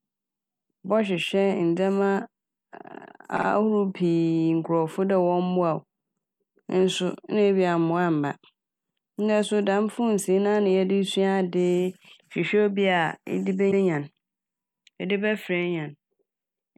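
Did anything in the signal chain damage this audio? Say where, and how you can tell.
Yes. Repeated frames damaged it at the codec or storage stage. A 52 ms block stutters, playing twice more from 3.36 to 3.46 s. A 105 ms block replays once from 13.70 to 13.81 s. Compressed frames were written again, and each event adds about 105 ms.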